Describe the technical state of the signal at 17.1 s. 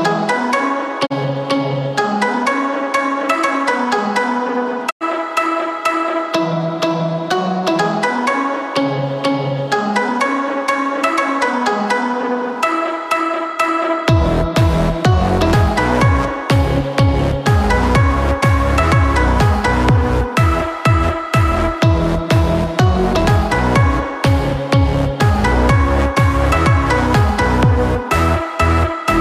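Nothing is wrong with the audio at 17.1 s; the signal is intact there.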